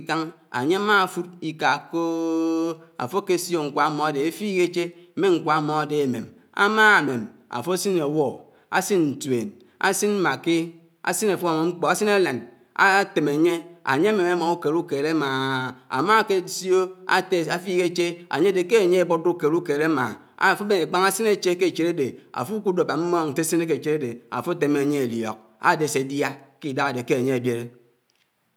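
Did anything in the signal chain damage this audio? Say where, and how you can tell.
No, nothing was damaged.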